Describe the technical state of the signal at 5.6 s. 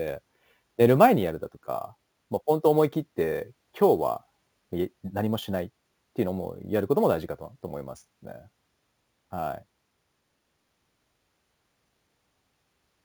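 At 5.6 s the speech carries imaging from sample-and-hold upsampling, and it runs through the whole clip. The sound was raised from 16 kHz to 44.1 kHz by repeating each sample with no smoothing filter. That leaves a mirrored copy of the spectrum between 8 kHz and 16 kHz, about 25 dB below the signal. It is heard as a bright metallic fizz that rises and falls with the speech. Its lowest copy moves against the pitch.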